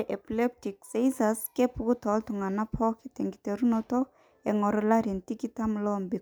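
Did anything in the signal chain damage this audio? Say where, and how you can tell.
No, nothing in the signal chain audibly damaged this speech recording. Every stage from capture to playback leaves nothing a listener could trace back to it.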